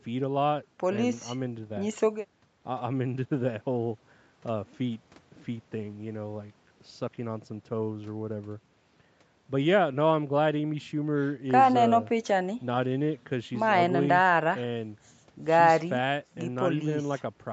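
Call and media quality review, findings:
No faults found in this speech clip. Nothing is heard above about 8 kHz, which fits the call microphone processing and a wideband call codec on the WebRTC path working as expected.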